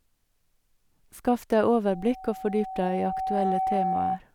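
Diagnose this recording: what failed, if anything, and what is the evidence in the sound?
Loudspeaker feedback squeal runs from 1.89 s to 4.20 s. It is a single 759 Hz tone that swells over about a second and a half until it is roughly as loud as the speech. The failure is in the analogue acoustic path, where the microphone picks up the loudspeaker it feeds. At 759 Hz the round-trip gain exceeds one, so that frequency reinforces itself on each pass and keeps growing instead of dying away.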